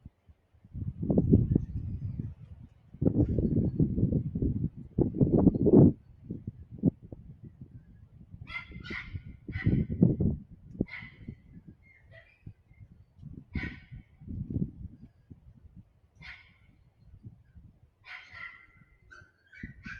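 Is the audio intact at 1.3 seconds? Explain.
No. At 1.3 seconds, as throughout, a noise suppressor built for speech is working on these everyday sounds, treating steady tones and tails as noise and pulling them down by around 15 dB while attacks pass. Unlike a compressor's pumping, sustains sink and flutter, not just loud peaks.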